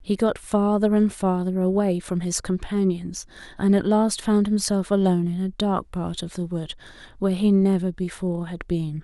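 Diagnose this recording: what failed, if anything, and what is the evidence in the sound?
Faint ticks come roughly every 0.4 s from 0.44 to 8.77 s. Those are clock slip clicks, likely from unsynced converter clocks around 50 ppm apart, each slipping one sample.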